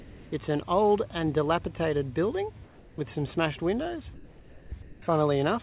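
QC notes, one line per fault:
0.00–0.32, 2.64–2.98, 4.14–4.72 and 4.82–5.02 s, comfort noise in place of the background: in each gap between sounds, the real background, about 22 to 23 dB below the loud parts, turns into flat, featureless hiss about 3 to 6 dB quieter, likely discontinuous transmission with receiver-generated comfort noise. The band-limited sound, with nothing above 4 kHz, suggests a narrowband call codec such as G.711.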